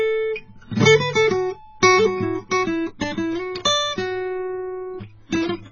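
A short music clip with AAC compression damage throughout: the sound is dull and smeared, sustained tones warble, and a spectrogram shows a hard ceiling with nothing above 7 kHz. This heavy damage likely comes from AAC-LC at a very low bitrate, around 16 kbps.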